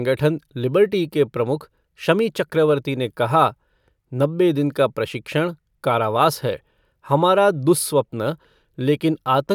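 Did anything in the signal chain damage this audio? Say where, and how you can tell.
No, nothing in the chain has damaged this speech.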